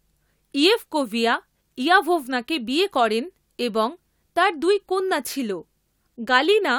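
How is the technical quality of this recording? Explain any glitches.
The technical quality of this recording is sound, with no glitches to explain.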